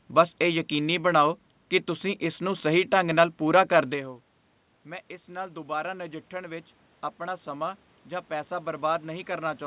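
From 4.84 s to the end, automatic gain rising occurs. The input fell by about 17 dB. Gain then climbs slowly, swelling speech and room noise together.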